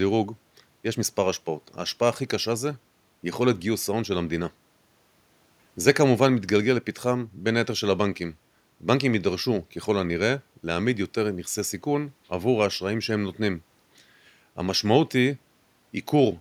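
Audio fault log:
Nothing stood out on listening to this speech recording, with only a faint room noise sitting about 44 dB below the talking.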